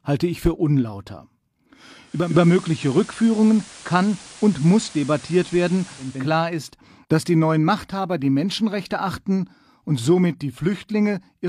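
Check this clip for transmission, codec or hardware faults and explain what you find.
One fault: digital radio blending to analogue, from 2.01 s to 6.36 s. The receiver lost its digital stream and cross-faded over 440 ms to the station's FM broadcast, then back. Through that stretch, the level shifts by about 2 dB, and a steady hiss sits roughly 20 dB under the signal. Unlike a codec dropping its bitrate, the change arrives as a smooth cross-fade with added hiss rather than swirly artefacts.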